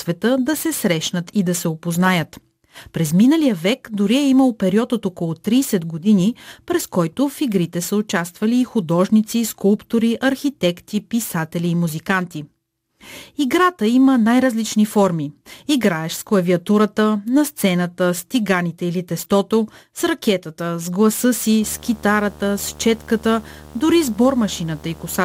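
A screen or video cable is coupling into the audio path from 21.62 s to the end of the speech, producing video or display buzz: a steady 75 Hz drone at the display's field rate, topped with hash, sitting roughly 25 dB below the speech.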